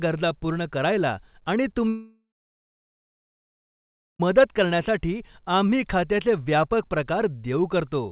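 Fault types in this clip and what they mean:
Long network dropout: speech breaks off at 1.88 s, a short fading buzz, then about 2 s of silence until 4.21 s, likely an outage, not a brief glitch.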